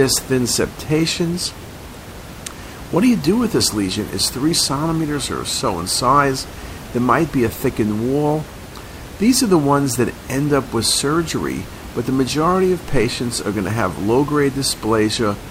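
No technical faults are present.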